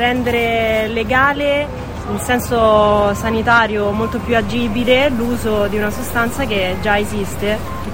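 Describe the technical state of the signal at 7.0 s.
At 7.0 s the signal is sitting on a DC step that began at 4.41 s and holds right through to the end. The zero line jumped by about -29 dBFS and stayed there, so there's a low thump at 4.41 s while the sound itself carries on unchanged.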